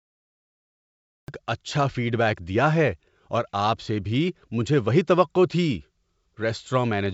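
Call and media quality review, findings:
Cut-off start, 0 to 1.28 s: digital silence, then speech enters abruptly mid-sound at 1.28 s with no attack or fade. Capture or stream began late, clipping the onset. G.722 wideband path at 64 kbit/s, codec coloration faint.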